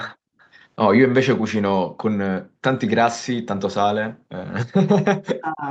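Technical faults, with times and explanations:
0.40–0.48 s, echo leak: a very faint delayed copy of the speech, well below the talker's level and trailing by 240 ms. That spacing separates it from room reverberation. It is likely left over from a far-end loudspeaker that the echo canceller did not fully subtract.
2.43–2.62 s, background gated by the echo canceller: the room sound drops by as much as about 40 dB for roughly a fifth of a second, then returns. The canceller pulled the microphone down while the loudspeaker played. Only the background dips, not a talker's voice.
4.82–5.66 s, speech suppressed in double talk: the talker's voice is cut deeply over most of this stretch. Both ends were likely speaking at once, so the canceller turned down the voice along with the echo. Unlike gating, the speech itself is lost.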